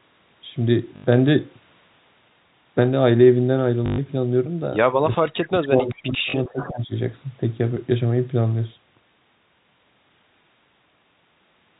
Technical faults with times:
0.96-1.04 packet loss with last packet repeated
3.86-3.98 packet loss with last packet repeated
5.14-5.28 echo leak
5.17-6.92 speech suppressed in double talk
5.94-6.03 echo leak
6.30-6.34 packet loss with last packet repeated
6.47-6.72 echo leak

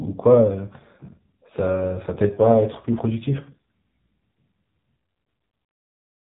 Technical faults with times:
0.00-6.29 AMR narrowband mobile codec

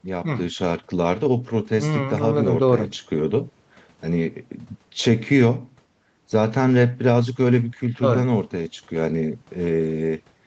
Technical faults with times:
none

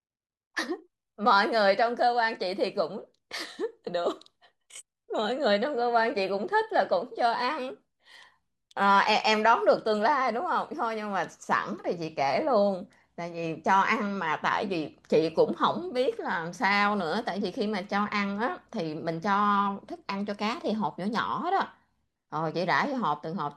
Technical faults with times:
none

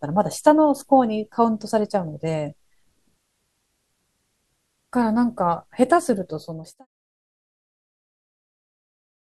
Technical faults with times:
none

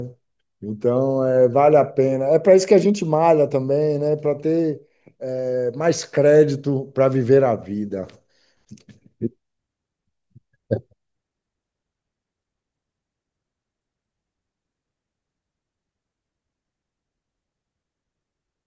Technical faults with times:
none

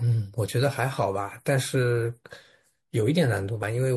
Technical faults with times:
3.62 compressed frames skipped

